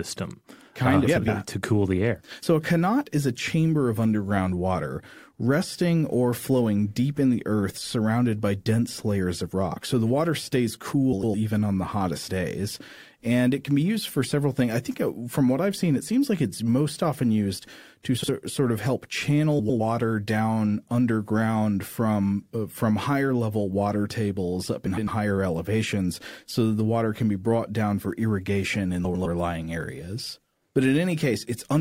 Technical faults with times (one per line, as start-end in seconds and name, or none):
1.07-1.28 frames out of order
11.12-11.34 frames out of order
18.18-18.29 frames out of order
19.59-19.80 frames out of order
24.86-25.08 frames out of order
29.04-29.26 frames out of order